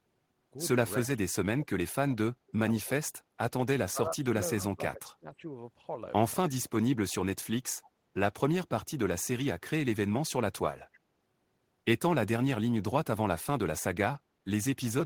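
A speech recording with two faults from a speakerphone echo canceller. Echo leak appears at 1.04 to 1.08 s and 7.83 to 7.9 s as a very faint, brief copy of the voice trailing it by 300 ms, likely residual loudspeaker pickup that the canceller missed. The fixed delay sets it apart from room reverberation, which smears continuously. Speech suppressed in double talk hits 1.05 to 3.23 s, 3.89 to 5.45 s and 6.5 to 6.73 s, where the voice drops sharply in pieces, most deeply in the first two stretches, likely because the canceller attenuated everything while both sides spoke. The gaps follow the overlapping talk, not a regular rhythm, which distinguishes them from packet-loss dropouts.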